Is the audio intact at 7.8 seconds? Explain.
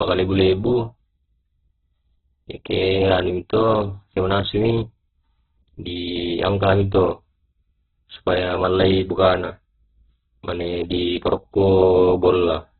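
No. At 7.8 seconds, as across the whole clip, the speech carries heavy damage that is likely from Opus compression at a very low bitrate, around 8 kbps. Starved of bits, the encoder keeps each band's energy but fills the detail by folding lower bands or inserting noise, and it has narrowed the bandwidth. Nothing survives above about 4.2 kHz, so the speech sounds muffled and narrowband, and its tonal parts turn rough, grainy and noisy.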